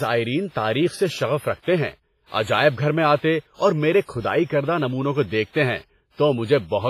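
Throughout, the speech rings and smears, with breathing hiss. Likely heavy WMA compression, fitting about 24 kbps, spreads noise across each block. Nothing remains above 15.5 kHz.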